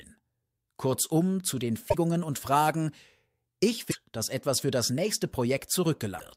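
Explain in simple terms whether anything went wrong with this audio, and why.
Damaged data in a compressed stream at 1.86 to 1.95 s, 3.88 to 3.96 s and 6.16 to 6.21 s: the decoder misreads broken chunks, producing short chirps or blips.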